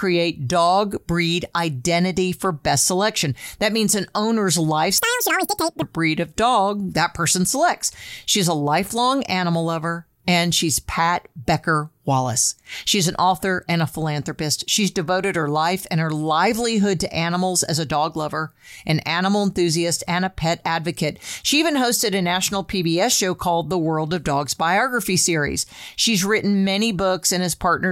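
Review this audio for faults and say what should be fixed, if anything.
From 4.98 s to 5.82 s the speech jumps to double speed and an octave higher (speed x2, up 12 semitones): audio read two samples at a time. The reader treats each pair of samples as one frame, as if the stream had two channels or wider samples, so the playback races. On a spectrogram the harmonics there are spaced twice as wide; the waveform looks compressed in time. Fix this by making the reader use the stream's actual channel count and sample width.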